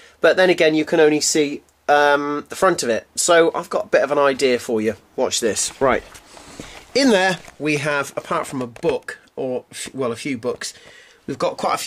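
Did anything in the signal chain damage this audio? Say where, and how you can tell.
No, nothing along the chain seems to have left a mark on this one, so there's no stage to point a finger at.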